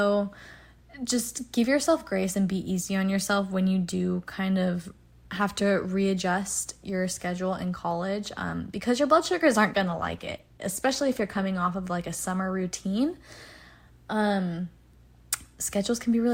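A speech clip with an adaptive stream at a lower bitrate from 9.71 to 11.71 s, after "your blood sugars aren't" and before "of like a summer". Codec artefacts rise abruptly with no gap, fitting a drop from about 64 to 16 kbit/s Opus.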